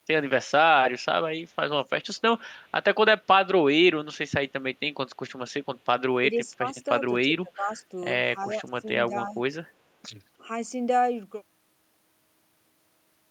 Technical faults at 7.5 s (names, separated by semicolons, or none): speech suppressed in double talk